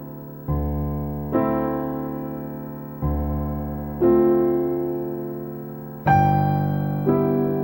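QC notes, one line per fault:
Throughout, video or display buzz. A 59.94 Hz field-rate buzz with hash sits well below the sound. A 15.7 kHz line-rate whine rides above it.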